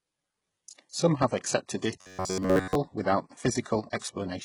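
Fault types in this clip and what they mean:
HE-AAC compression: The treble is thin and artificial, with heavy damage throughout, which fits a very low bitrate around 12 kbps. The likely cause is HE-AAC: its upper band is rebuilt from copied lower bands rather than coded, so sibilants come out gritty and metallic. A plain low-pass filter would only dull the top, not make it sound synthetic, and that is what separates the two.
Robotic sound from repeated short buffers: From 2.01 to 2.75 s the sound collapses into a rigid buzz near 94 Hz that loosely tracks the underlying speech. That pitch corresponds to a chunk of roughly 10.7 ms repeated over and over, with most of the span replaced by repeats. The likely cause is audio arriving too slowly while playback loops the last buffer. Codec warbling wanders in pitch, whereas this buzz stays locked at one fixed frequency.
Pre-echo: Around 3.99 to 4.02 s, a short hiss smears about 24 ms ahead of a sharp attack, softening its onset. 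Compression noise meant for the loud moment has spread back across the whole transform block into the quiet gap before it. The direction tells it apart from room echo or reverb: those trail after a sound, while this artefact arrives before the attack it belongs to.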